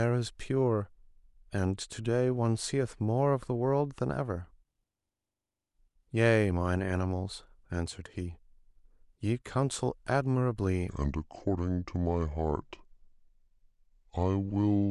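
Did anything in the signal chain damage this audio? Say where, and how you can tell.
Yes: a wrong sample rate at playback from 10.89 s to the end slows the speech to 0.726 speed, 5.55 semitones lower, which fits 44.1 kHz audio clocked at 32 kHz. Because pitch and tempo drop together, it is not a pitch-shift effect.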